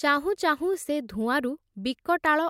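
No technical faults can be heard in this speech recording. Nothing in the sound calls for comment on how it was captured or carried.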